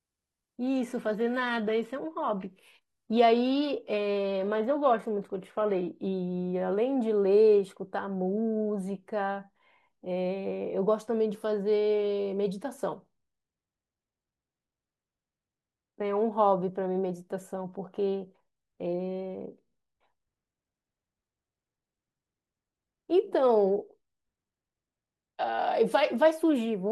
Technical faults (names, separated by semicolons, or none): adaptive stream starting at a low bitrate